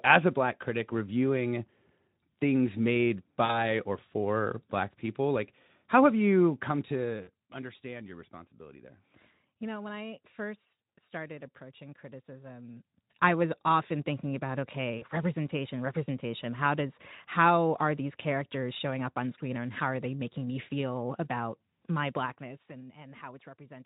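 VoIP packet loss concealed by the speech codec strikes three times. At 3.45 to 3.59 s, between "things made" and "or for black people", about 40 ms of audio drops out, which fits two 20 ms frames. The decoder guesses from its last pitch and filter, so the sound is stretched into a buzzy tone or coloured noise that fades. The same happens at 7.23 to 7.29 s, before "understand your responsibility there", and at 14.98 to 15.04 s, after "was often thinking about". The Speex coding at 15 kbps adds only light damage.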